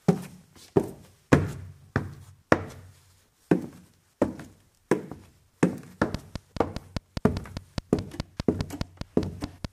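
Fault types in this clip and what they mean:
Train of clicks: A run of short, matching pulses sits on top of the sound from 6.15 s to 9.66 s. They arrive at a steady 4.86 per second, about twenty in all. Each click stands out sharply, peaking roughly 15 dB above the surrounding audio. The ticking is plain even where the sound is quiet. The even spacing and much the same shape point to a repeating source, likely interference from nearby equipment or a faulty connection or power supply.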